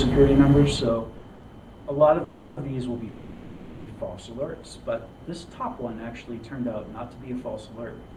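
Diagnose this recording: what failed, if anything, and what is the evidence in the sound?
Network and jitter-buffer stage: two short stalls from a late packet, at 1.17 to 1.24 s (50 ms) and 1.34 to 1.45 s (90 ms). The last sound is held too long, then resumes where it stopped. On a spectrogram these show as brief smeared horizontal streaks. The waveform shows a repeated periodic stretch.

Call audio freeze, twice, at 2.24 to 2.59 s (330 ms) and 3.09 to 3.89 s (780 ms). The cause is likely packets held up in transit, which emptied the jitter buffer. The receiver extends the last sound as a fading buzz that never reaches full silence. Playback then continues without loss. A spectrogram shows frozen spectral columns decaying over time, and the waveform envelope tapers before normal activity returns.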